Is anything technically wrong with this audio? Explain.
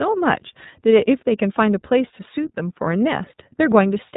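Yes. The iLBC codec affects the whole clip. Each 30 ms frame's excitation is coded independently, which fits the 13.33 kbps mode. Nothing above about 3.8 kHz survives. The speech sounds muffled, and the coding roughness is plainly audible as a rough, synthetic edge.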